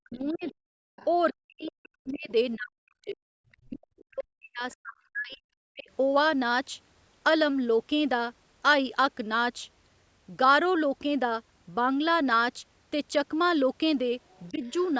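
The echo canceller on this speech recording likely failed to separate the talker from the loudspeaker echo while both sides spoke at once, producing speech suppressed in double talk. It pulled the talker down as well as the echo. From 0.00 to 0.79 s and again from 1.33 to 5.89 s the voice sinks, at its worst by something like 40 dB. A much lighter dip of a few decibels follows between 14.51 and 14.63 s. The same canceller also likely left residue of the far end in the microphone signal, so the other side's voice leaks through. A faint second voice runs underneath from 0.28 to 2.24 s, roughly 25 dB below the talker. Brief scraps of it surface at 3.52 s and 4.71 s, and a longer patch appears from 14.29 to 14.73 s, around 35 to 40 dB down.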